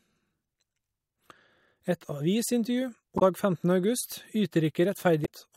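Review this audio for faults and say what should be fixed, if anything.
Two short glitches in this speech clip come from damaged data in a compressed stream, one from 3.16 to 3.22 s and another from 5.22 to 5.27 s, each lasting about 50 to 60 ms. Part of the encoded file got lost or overwritten there, so the decoder misread those frames, lost its place and had to hunt for the next valid frame header. What you hear is a brief glitch each time. To prevent it, transfer and store the encoded file with checksums, and re-fetch or re-encode any copy that fails verification.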